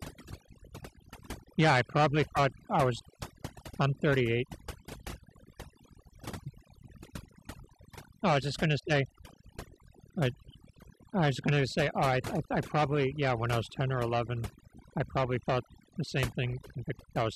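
Right from the start and all the way through, you can hear overdone noise removal: the denoiser was pushed too hard, so any frequency band sitting near its noise estimate gets slammed shut. The background drops and breaks up into little twinkly specks, and the quieter bits of speech vanish too.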